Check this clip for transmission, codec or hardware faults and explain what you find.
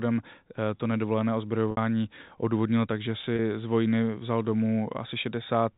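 Two brief dropouts in the speech show packet loss with pitch repetition. The first runs from 1.71 to 1.77 s, between "to nedovolené" and "odůvodnilo takže", lasting 60 ms, which fits two lost 30 ms packets. The second, 3.36 to 3.39 s, just before "z vojny vzal", lasts 30 ms, consistent with one packet. At each gap the receiver filled the hole by looping the last pitch period and fading it out, so the voice briefly holds as a slightly buzzy, frozen tone before normal speech resumes. The telephone-band G.711 sound, capped at 4 kHz, carries through both events.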